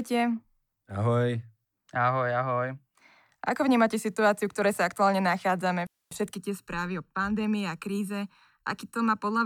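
From 6.36 s, right after "ktoré sa aktuálne nachádzame", to the end, channel delay causes comb filtering: one channel lags by under a millisecond before mono summing, cancelling a first notch near 700 Hz and evenly spaced ones above, leaving the speech hollow and phasey.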